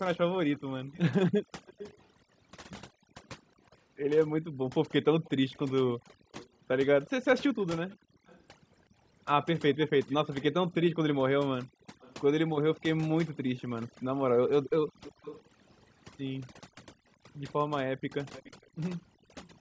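Overdone noise removal runs through the whole clip. The reducer was set too strong. It pulls individual frequency bands down whenever they sit near its noise estimate. The background becomes near silence with twinkling specks. The quieter parts of the speech are eaten away.

From 0.53 to 2.04 s, a faint delayed copy of the speech trails the original by 367 ms. It sits well below the main speech, roughly 20 dB down. This is likely echo leak: a far-end loudspeaker's echo canceller missed part of its microphone pickup and sent it back.

Between 2.93 and 8.25 s, the room sound dips sharply, by up to about 40 dB. This is background gated by the echo canceller. It clamped the microphone while the loudspeaker played. The drops total well under a second across that span, and the room tone returns each time.

The same 367 ms echo returns from 5.24 to 19.5 s, again about 20 dB under the speech.

Brief background dropouts recur from 11.67 to 11.94 s and from 19.16 to 19.33 s. 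Each is a short duck of up to about 40 dB before the room sound comes back.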